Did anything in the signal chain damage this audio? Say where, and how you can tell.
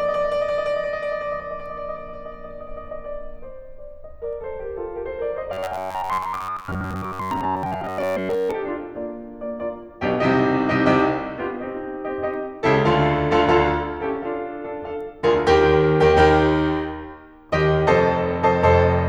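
Yes. From 5.53 to 8.52 s, the music has robotic sound from repeated short buffers, a fixed 93.8 Hz buzz. A starved buffer likely loops 10.7 ms chunks.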